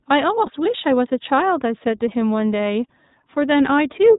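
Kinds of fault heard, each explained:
iLBC codec: The speech is band-limited and slightly rough and synthetic throughout, with nothing above 4 kHz and plainly audible coding damage. This is the narrowband VoIP codec iLBC, which codes the excitation of each short frame on its own, without drawing on the previous one. The harshness and missing top end fit iLBC running with 20 ms frames at 15.2 kbps.
Lost iLBC frames: From 0.46 to 0.50 s, a brief held, slightly buzzy stretch stands in for the speech. This is packet loss concealment. When a packet fails to arrive, the iLBC decoder fills the gap by repeating the last pitch cycle mixed with noise. The gap lasts about 20 ms, which points to a single lost frame. Because iLBC frames decode independently, the speech returns almost at once.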